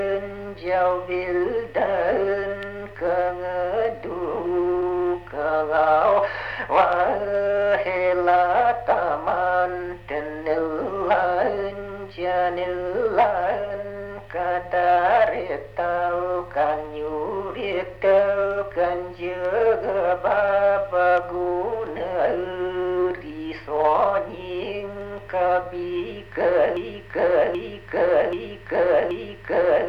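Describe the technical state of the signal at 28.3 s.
At 28.3 s the signal is in a broken-record loop: from 26.77 s to the end, a 0.78 s fragment repeats exactly four times, likely from a stalled player resending its last buffer.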